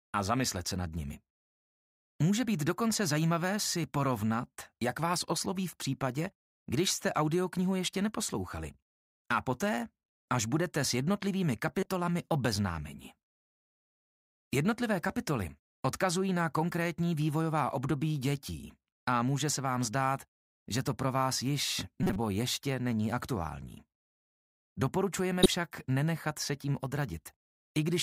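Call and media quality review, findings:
Corrupt frame decoded. Short chirps or bursts at 11.77–11.86 s, 22.03–22.16 s and 25.43–25.47 s, spanning about 3, 4 and 1 codec frames. Decoder played bit-damaged frames, placing energy at wrong frequencies. Peaks rise from about −20 to about −10 dBFS.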